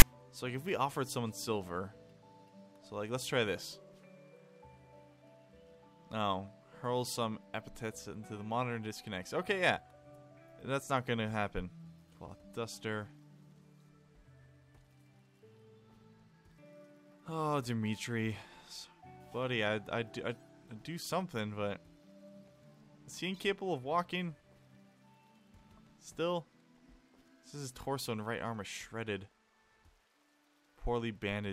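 A block of file tags played as audio opens the clip: the player has treated the text tag data, and the zero padding that follows it, as if they were samples. The text bytes produce a loud, harsh rasp offset to one side, and the padding drops to dead silence, so the first 0.00 to 0.02 s is a hard-edged burst of static before the real audio begins.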